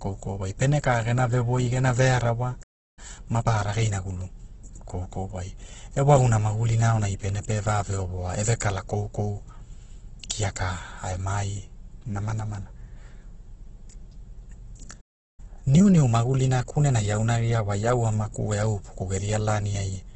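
All the way through, the speech has the grainy, rough texture you'd expect from heavy Opus compression, likely in its CELT music mode at a very low bitrate, something around 12 kbps. Band energy is kept but filled in coarsely, and nothing comes through above about 8 kHz, so it sounds narrowed and gritty.

At 2.63 s the audio just drops to silence for about 343 ms, until 2.99 s, a playback stall where the player was likely starved of data or blocked. Right after, from 2.99 to 4.35 s, there's time-compressed catch-up: the player trims its backlog by splicing out small chunks, so the speech runs about 1.25 times fast at normal pitch.

At 8.60 s, just after "ovoa e ve", there's pre-echo. A sharp onset landed late in a transform block, so the codec's noise got smeared about 11 ms ahead of it. You hear a quick hiss before the attack, which itself sounds softened.

At 15.00 s a second stall cuts the sound for about 374 ms, to 15.40 s. 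Catch-up follows from 15.40 to 17.88 s, hurried at about 1.15 times, and it settles just before "au amaku e".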